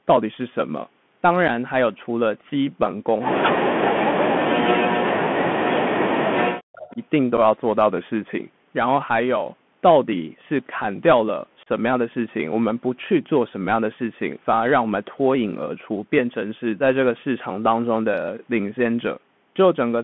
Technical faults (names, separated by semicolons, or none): Bluetooth CVSD headset codec; unconcealed Bluetooth headset packet loss; speech suppressed in double talk; echo leak